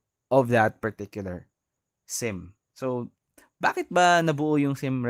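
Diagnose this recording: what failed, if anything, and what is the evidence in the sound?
Nothing in the speech points to a failure at any stage, from capture through conversion, processing, transmission, storage or playback.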